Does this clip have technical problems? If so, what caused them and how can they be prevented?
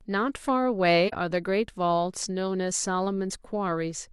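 Yes. From 1.08 to 1.13 s the speech dips briefly: AAC frame loss with muting. The missing stretch, about 43 ms, fits one lost frame that the decoder zeroed. Unlike a hard dropout, the overlapping windows soften both edges. Error protection or retransmission on the transmission link would prevent it.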